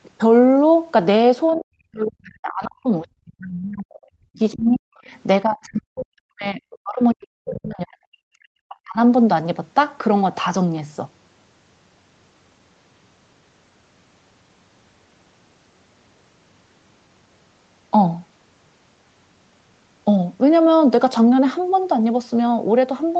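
Speech recording with two echo-canceller faults. The other side's voice leaking through is heard roughly 15 to 35 dB below the talker, at 1.51, 3.94, 4.35, 5.06 and 7.46 s, likely residual loudspeaker echo the canceller failed to remove. Speech suppressed in double talk pulls the talker down by as much as about 40 dB from 1.57 to 3.94 s, 4.16 to 4.98 s and 5.45 to 8.99 s, likely the canceller attenuating both voices during overlap. The band stops at 8 kHz, consistent with the call path.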